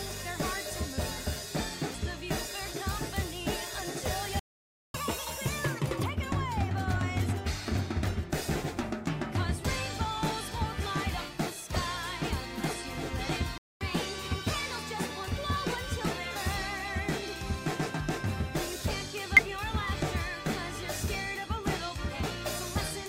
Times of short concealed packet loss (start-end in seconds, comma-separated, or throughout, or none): none